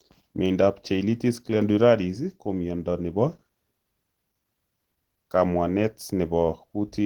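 Throughout, the speech sounds hoarse and grainy rather than swirly like MP3. This is likely Opus compression in hybrid mode near 16 kbps, with the band still reaching 20.1 kHz.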